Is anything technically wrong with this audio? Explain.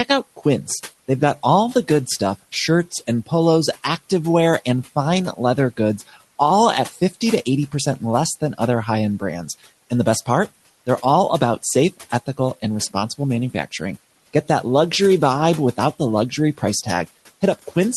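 Yes. The speech is cut by the noise suppressor twice. From 5.98 to 6.17 s, just after "activewear and fine leather", and again from 6.92 to 7.15 s, just after "all at", the suppressor mistakes speech for background and pulls it down with the room noise. The deepest drop is about 13 dB in the first event and about 9 dB in the second. In each, roughly a tenth of a second of speech sounds swallowed and faint.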